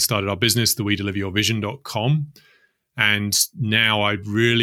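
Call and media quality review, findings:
No audible faults found in the speech; nothing to flag.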